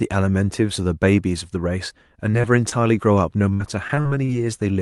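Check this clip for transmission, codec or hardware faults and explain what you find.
The speech carries two kinds of transmission fault, both from packet loss on a call path whose Opus-style coding keeps the audio band up to about 12 kHz.

Short concealed packet loss at 2.31 to 2.35 s, 2.41 to 2.46 s and 2.70 to 2.74 s: roughly 20 ms of audio arrived too late each time. The decoder extended the preceding sound and blended back, leaving brief smears or wobbles where a consonant may vanish.

Repeated packet loss (robotic sound) from 3.54 to 4.30 s: five gaps, the longest 61 ms, totalling about 180 ms missing. Each gap was patched by continuing the last sound before the next gap arrived, so about a fifth of the stretch is synthetic, which sounds choppy with pieces missing.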